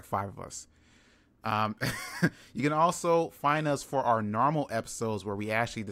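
Nothing in this short bit of speech stands out as a technical problem, so there's no time or cause to point to.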